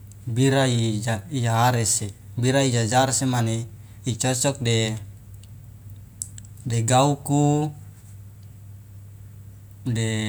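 Nothing technically wrong turns up anywhere in this bit of speech, so there's no fault to pin a time or a cause on.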